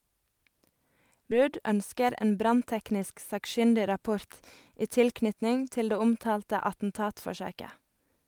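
A speech clip with two timing problems close together. At about 1.31 to 1.33 s there's a skip ahead: the playback just jumps forward with no gap filled in, and something like 0.4 s of speech is missing, so the two sides butt up against each other almost directly. That's a chunk of audio dropped while later audio was already queued, either lost on the way or thrown out by the jitter buffer when it overflowed, and it pulls the delay down by roughly the same amount. Then from about 1.96 to 2.62 s there's a jitter buffer speed-up: the talking runs at around 108% speed but keeps its pitch, so it comes across a little hurried. The receiver is trimming out short pitch-period-sized slices over and over to work off excess buffered audio, shaving around 70 ms off in total.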